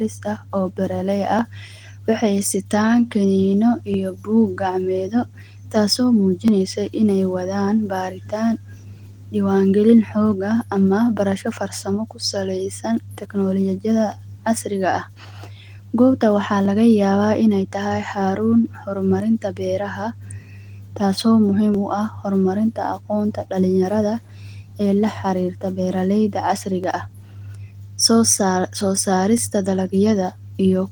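Speech, with a click or pop recurring every 2.54 s from 1.39 s, just after "aah oo beer lay", through 29.38 s, about ten in all. The steady spacing points to clock drift buffer slips: two devices likely running on separate clocks roughly 300 ppm apart, so a buffer periodically drops or repeats a few dozen samples. On a waveform each slip shows as a step discontinuity; a spectrogram shows evenly spaced thin vertical broadband lines, above the light Opus coding still reaching about 20 kHz.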